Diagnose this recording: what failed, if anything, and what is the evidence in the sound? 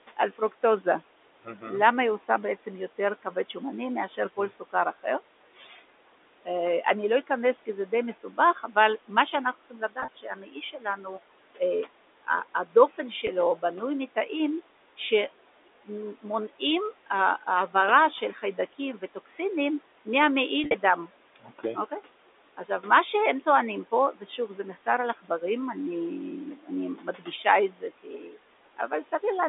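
Noise suppressor artifacts, call processing stage: the room noise, which sits about 17 dB under the speech, drops by about 18 dB between phrases and comes back up beneath them. The suppressor gates bands frame by frame.

Speech cut by the noise suppressor, same stage: from 0.17 to 25.43 s, roughly 3 s of speech in total is pulled down by up to about 19 dB. From 26.56 to 29.13 s, under a second is lowered by about 18 dB. Quiet consonants and word endings were classed as noise and attenuated with the background, so they sound swallowed.

Packet loss with pitch repetition, network stage: at 10.0 s, 60 ms goes missing across 80 ms, with a longest gap of 30 ms. At 13.27 s there is a single 10 ms loss, and at 20.64 s, 80 ms goes missing across 100 ms, with a longest gap of 50 ms. The receiver repeats the last pitch cycle and fades it, which gives a brief buzzy hold.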